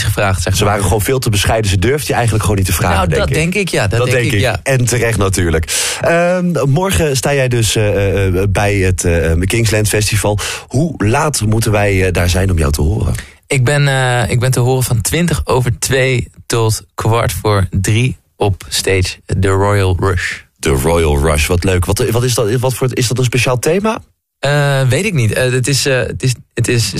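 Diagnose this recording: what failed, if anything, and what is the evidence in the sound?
Nothing stood out on listening that would point to a failure at any stage of the chain.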